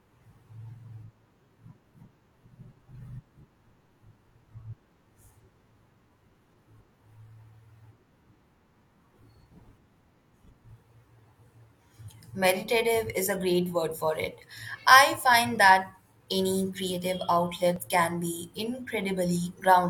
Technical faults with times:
17.76-17.79 overlap between stream segments

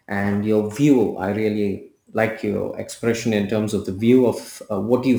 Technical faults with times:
0.00-5.19 sample clock jitter

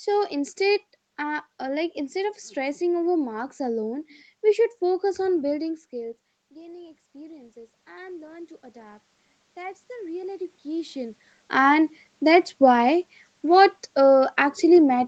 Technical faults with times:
5.91-11.27 automatic gain rising
11.51-15.03 automatic gain falling

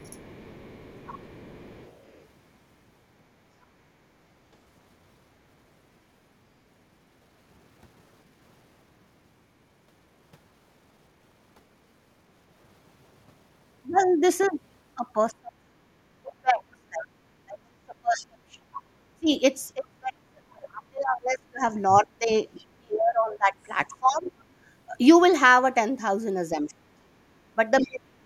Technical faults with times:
0.00-2.25 other side's voice leaking through
0.06-0.17 speech suppressed in double talk
15.30-24.28 speech suppressed in double talk
22.58-22.65 other side's voice leaking through
24.24-24.31 other side's voice leaking through
26.56-28.25 speech suppressed in double talk
27.80-27.88 other side's voice leaking through

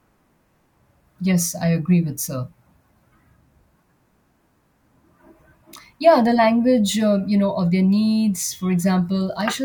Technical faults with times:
none

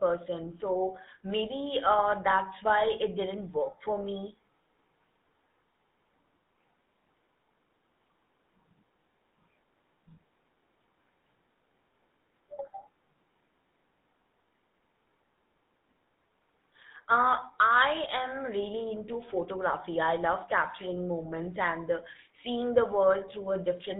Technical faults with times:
0.00-24.00 GSM full-rate codec

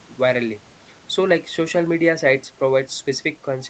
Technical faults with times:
none

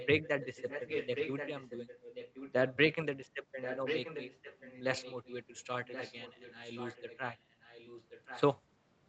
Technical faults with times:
0.00-2.76 echo leak
3.61-5.34 echo leak
5.85-8.42 echo leak

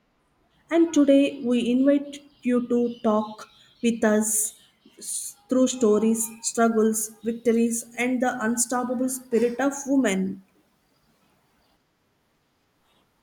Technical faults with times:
0.00-6.20 de-emphasis applied wrongly

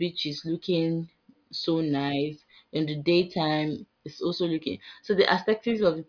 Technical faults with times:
none

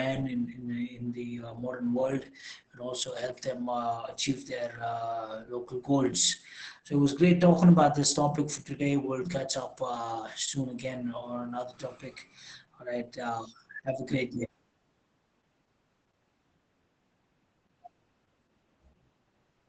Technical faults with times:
0.00-19.68 Opus voice compression

